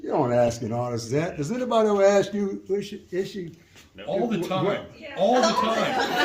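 At 0.47 to 0.49 s a corrupt frame decoded fault produces a short squeaky burst. Flipped bits in what sounds like a few consecutive compressed frames were decoded as if valid, so misread gains and codes put energy at the wrong frequencies for roughly 30 ms, peaking around -15 dBFS. On a spectrogram this appears as a brief vertical smear of misplaced energy unrelated to the surrounding sound; the waveform shows a sudden jagged spike.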